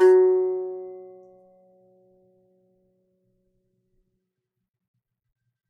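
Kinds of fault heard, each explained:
No technical faults can be heard in the music; the signal holds steady with no dropouts, distortion, or other defects at any point.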